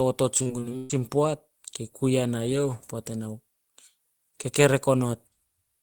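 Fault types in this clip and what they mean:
Repeated packet loss (robotic sound): six gaps between 0.37 and 1.02 s, before "poat kei", are patched with repeated sound, giving choppy speech with pieces missing rather than one clean dropout.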